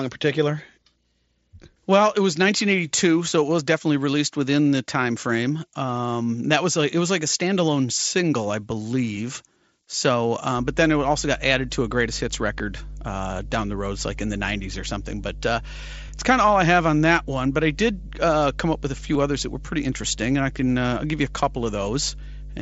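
Mains hum begins at 10.55 s and runs to the end: a steady 50 Hz tone from power-line coupling, roughly 15 dB below the speech, with some low harmonics.

Concealed Bluetooth headset packet loss occurs at 16.08 s and 19.14 s. Each gap fits a single lost 7.5 ms frame, and the receiver patched it by repeating recent waveform, so it passes almost unnoticed under the mSBC wideband headset sound.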